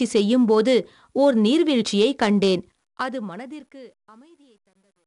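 The speech is encoded throughout with 4-bit ADPCM compression. Each sample is stored as a coarse 4-bit step from a predicted value, and the step size lags behind fast changes. The result is a gritty hiss that rides on every loud syllable and roughens sharp onsets. Nothing is heard above about 10.6 kHz, which points to a sample rate near 22 kHz and a data rate of about 88 kbps. The codec damage is plainly audible.

From 2.60 s to the end at 5.07 s, the fade-out passes through a gain stage that keeps too few bits and adds no dither. This is truncation distortion on a fade, and the sound points to roughly 11 bits. As the level sinks toward the smallest step, the waveform collapses into a few square steps. From 3.9 s to 5.07 s the tail is at its worst, turning grainy.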